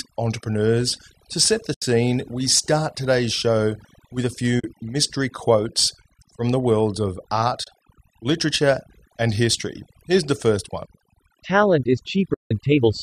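Overdone noise removal runs through the whole speech clip. The reducer was pushed so hard that any frequency band sitting near its noise estimate gets pulled almost to nothing, and the softer parts of the voice are dragged down with the hiss. Between phrases the background falls to near silence dotted with twinkling specks. A spectrogram shows a dark, empty floor scattered with isolated bright dots, with the faint edges of the harmonics gouged away.

The speech also has four short dropouts from AAC frame loss with muting. The first runs from 1.74 to 1.82 s, about 80 ms, between "entrepreneurs to set the" and "we start today's show". The second is at 4.60 to 4.64 s, about 40 ms, after "today's show with a" and before "mystery quotes from the". The third is at 7.64 to 7.67 s, about 30 ms, between "from the worlds of" and "literature and history". The longest is at 12.34 to 12.51 s, about 170 ms.

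In each one the decoder had no data and zeroed the spectrum. The overlapping windows fade the sound down and back up, so each dropout is a soft-edged hole. The lengths fit whole 10 ms frames, likely from the low-delay AAC stream. On a waveform each is a tapered notch to flat silence. On a spectrogram it is a clean vertical blank column with blurred edges.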